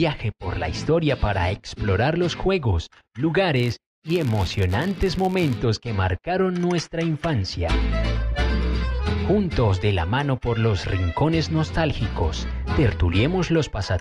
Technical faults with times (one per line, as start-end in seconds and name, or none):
3.56-5.60 filter restarted on every block